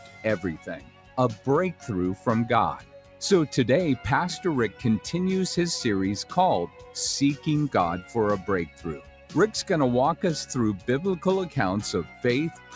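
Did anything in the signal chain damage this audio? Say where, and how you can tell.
Yes. At the call-processing stage, a speech noise suppressor was left running on this sound, treating steady material as noise, so the level pumps by roughly 10 dB throughout.

It audibly cuts the sound by about 8 to 12 dB at 0.0–0.25, 0.57–1.18, 2.77–3.21, 6.68–6.95, 8.67–9.32, 12.05–12.24 and 12.54–12.73 s. Sustained parts and tails sink while onsets get through.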